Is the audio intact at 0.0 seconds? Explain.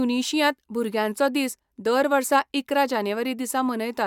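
Yes, the speech at 0.0 seconds is intact, with no fault audible at that moment.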